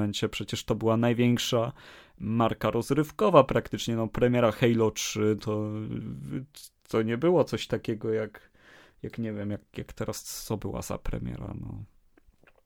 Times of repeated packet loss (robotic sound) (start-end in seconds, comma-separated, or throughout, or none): none